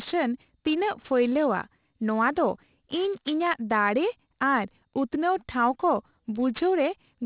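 Speech, and the whole clip has aliasing. The sibilants come out gritty and metallic, and the spectrum runs flat out to a hard wall at 4 kHz. That points to a drop to 8 kHz sampling with no low-pass filter first, so everything above 4 kHz folded back down into wrong, unrelated frequencies. The folded energy sits roughly 25 dB under the signal.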